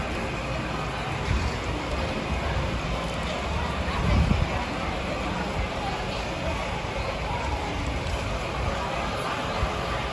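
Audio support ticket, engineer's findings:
No faults found on listening; nothing to report for this ticket.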